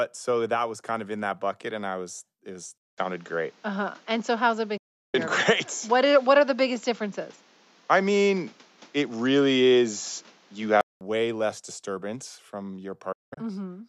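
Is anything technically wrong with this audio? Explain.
Yes. From 2.78 to 11.01 s, after "I was it was", the input was likely switched to a poorer device. The new device cuts everything above 7.6 kHz, so the speech turns duller, with a brief 0.2 s silence at the switch, a level shift of roughly 5 dB, and a new noise floor roughly 30 dB under the speech. Full clarity returns before "less disturbance from".

There are two digital broadcast dropouts, where the receiver lost valid frames and muted until clean data resumed. At 4.77 to 5.15 s, the sound fades out over 8 ms and leaves a 0.36 s hole. At 13.12 to 13.38 s, just after "less disturbance from", gaps totalling 0.22 s spread over 0.24 s, the longest lasting 0.19 s. The speech in both gaps is lost.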